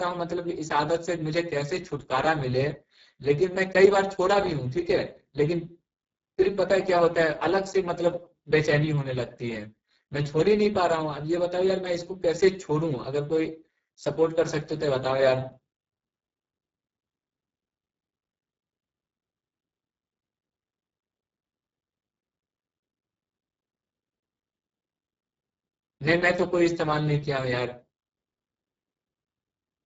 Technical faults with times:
0.00-29.85 Speex codec

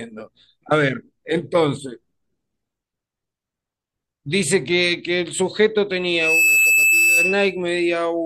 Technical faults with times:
5.91-7.63 loudspeaker feedback squeal

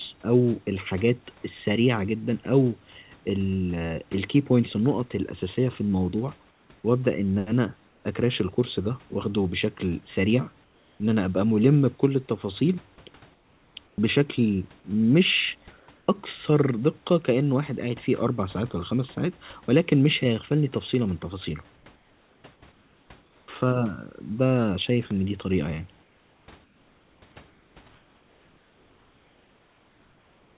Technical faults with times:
6.48-6.70 comfort noise in place of the background
7.88-8.04 comfort noise in place of the background
10.64-11.00 comfort noise in place of the background
13.34-13.98 comfort noise in place of the background
15.80-16.08 comfort noise in place of the background
21.76-23.48 comfort noise in place of the background
26.02-30.57 comfort noise in place of the background

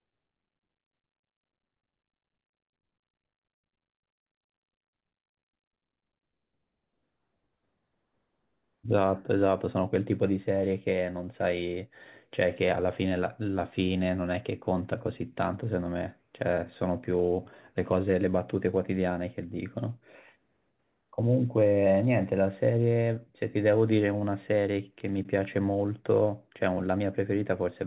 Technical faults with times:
none

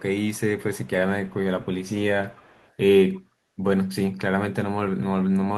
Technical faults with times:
0.31-0.90 echo leak
1.26-1.35 echo leak
2.27-2.75 echo leak

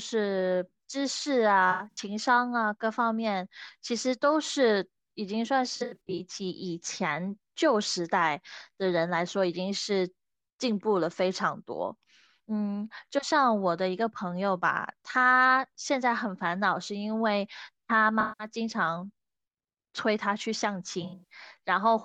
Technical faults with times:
1.71-1.98 AAC frame loss with concealment
5.76-6.19 AAC frame loss with concealment
18.20-18.47 AAC frame loss with concealment
21.02-21.32 AAC frame loss with concealment

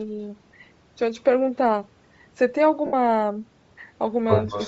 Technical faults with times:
0.00-4.67 Bluetooth LC3 compression
2.86-2.93 lost LE Audio frames
4.51-4.67 echo leak

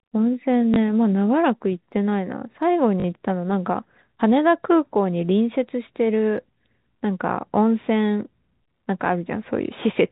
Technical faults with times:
0.74-0.76 packet loss with last packet repeated
3.00-3.04 packet loss with last packet repeated

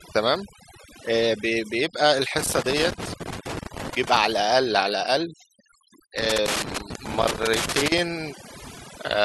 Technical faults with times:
0.00-9.25 overdone noise removal
2.38-4.18 loose connector crackle
6.18-7.98 loose connector crackle

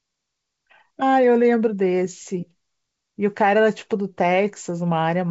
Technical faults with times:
none

